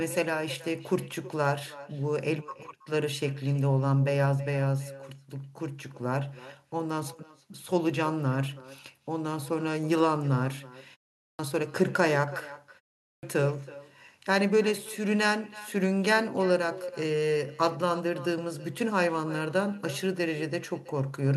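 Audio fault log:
Throughout: echo with no canceller. Every phrase is trailed by a second, quieter copy arriving roughly a third of a second later, sitting about 18 dB below the direct sound and sounding thinner. A far-end loudspeaker is feeding the talker's own sound back into its microphone, and nothing subtracts it before it returns over the network. Unlike room reverberation, the tail is a distinct delayed repeat, not a smooth decay blending into the original.
11.20 s and 13.02 s: clipped start after a pause. Each time the sound resumes after a short gap of about 0.3 s, its onset is cut off, with about 191 ms lost at 11.20 s and about 209 ms at 13.02 s, so the sound jumps in abruptly without its first sounds. The output device is dropping into an idle state during silence and takes that long to wake before audio passes again. Unlike muting in pauses, which fades the gap but lets the next sound through intact, here the beginning itself is missing.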